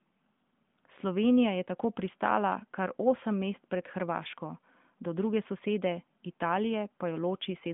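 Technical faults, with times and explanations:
Nothing here counts as a technical fault, since the speech just carries the narrow, phone-line character of the AMR narrowband mobile codec at 12.2 kbps, with nothing above 3.7 kHz getting through.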